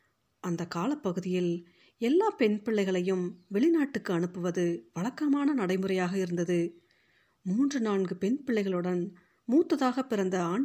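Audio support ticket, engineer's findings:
No fault found on listening to this speech recording. Nothing audible points to a failing component anywhere in the chain.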